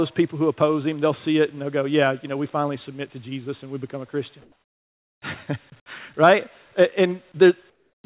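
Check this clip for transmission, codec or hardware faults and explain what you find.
The background is replaced by comfort noise in two pauses, heard over a call path whose band stops at 4 kHz.

From 4.42 to 5.22 s and from 7.70 to 8.04 s, comfort noise replaces the background. The real room sound gives way to a flat, featureless hiss, about 6 dB and then about 11 dB quieter. The likely cause is discontinuous transmission: the sender goes quiet and the receiver synthesises noise. Unlike a gate or a dropout, the pause never falls to silence.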